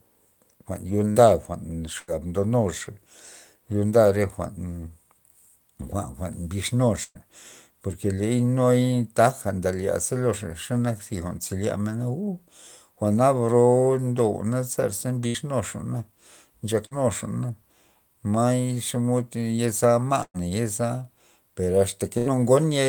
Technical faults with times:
1.11-1.18 short concealed packet loss
1.99-2.10 burst of packet loss
7.03-7.18 burst of packet loss
15.27-15.37 burst of packet loss
16.86-16.94 burst of packet loss
20.23-20.37 burst of packet loss
22.18-22.36 burst of packet loss

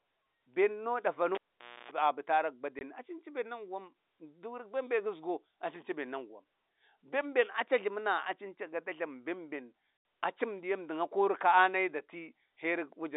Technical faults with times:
1.35-1.91 cable pulled and plugged in
2.79-2.81 packet loss filled with silence
9.97-10.05 packet loss filled with silence

